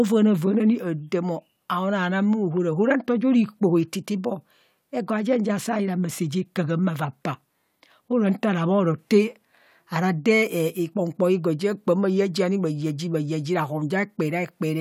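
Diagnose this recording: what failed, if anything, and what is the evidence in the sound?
Nothing failed: no fault is audible at any stage of the signal chain in this speech recording.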